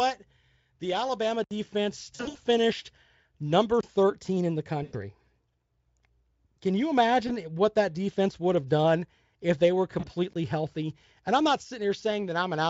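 A block of digital silence at 1.44 to 1.51 s drops the speech out for about 70 ms. VoIP packet loss concealed by the speech codec follows at 2.15 to 2.37 s: around 160 ms of packets go missing, scattered across 200 ms, and the decoder stretches its last pitch and filter into a buzzy tone or coloured noise that fades. Another 23 ms silent block at 3.81 s, which fits a 1024-sample buffer, leaves a short hole. Concealment returns after "in the" at 4.83 to 4.96 s (about 100 ms lost), at 7.27 to 7.32 s (20 ms), and after "done if they were" at 9.99 to 10.09 s (40 ms), each time leaving the voice weakened. A final 23 ms silent block at 10.33 s comes just after the same words.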